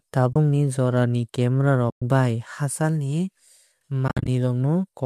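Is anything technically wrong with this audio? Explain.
Yes. There are three AAC frame loss with muting gaps: 0.33–0.36 s (30 ms), 1.90–2.02 s (120 ms), and 4.08–4.28 s, where 150 ms of holes is scattered over 200 ms, the longest run being about 70 ms. The decoder zeroed the missing spectrum, and the overlapping windows fade the speech out and back in. A hard sample dropout leaves abrupt edges and a click. These holes are soft-edged, with lengths that fit the roughly 10 ms frames of the low-delay codec, likely AAC-ELD at 64 kbps.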